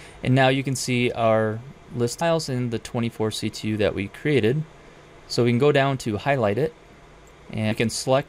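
You get two abrupt skips in the sound, at 2.21 s and 7.71 s, each losing roughly a third of a second with the edges butted straight together. That's likely audio missing between chunks, with the recorder dropping material each time it rolls over its 3-second block.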